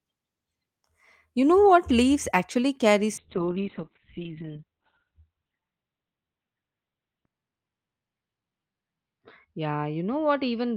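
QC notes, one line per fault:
3.19 s to end, call bitrate drop: after "actually carry" the codec starves, consistent with a fall from about 32 to 6 kbps. Treble cut from 20 to 4 kHz, rough and muffled, worst for about 4 s.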